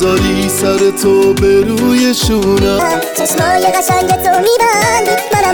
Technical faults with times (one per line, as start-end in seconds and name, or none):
2.79-5.54 section at the wrong speed